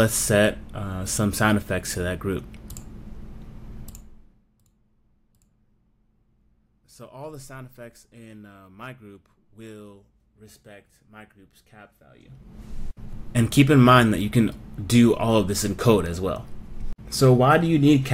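From 3.83 to 4.48 s the level falls by roughly 25 dB in 1 dB jumps with no smoothing, about forty per second, so zipper noise ticks over the sound as it fades. From 12.03 to 12.61 s the same zipping returns as the level climbs back by roughly 25 dB. On a waveform the envelope forms a staircase, and a spectrogram shows a comb of thin vertical broadband lines, one at each step.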